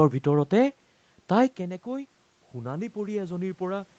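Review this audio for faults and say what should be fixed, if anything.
From 1.57 s to 3.98 s, automatic gain rising lifts speech and room noise together by about 5 dB after the input falls about 14 dB as the talker moves back. The waveform envelope swells gradually, and the spectrogram's noise floor brightens alongside the speech. Keeping the talker at a steady distance from the microphone would prevent the level drop that sets off this slow gain climb.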